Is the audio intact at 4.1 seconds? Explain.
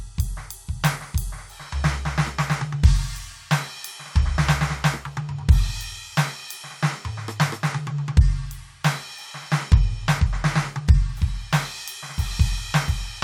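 Yes, the music plays through 4.1 seconds without any audible fault.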